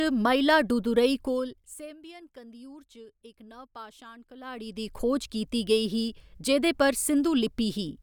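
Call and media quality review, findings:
No faults found in this speech recording. Any level changes come in as smooth, gradual rises or falls, as with a fader.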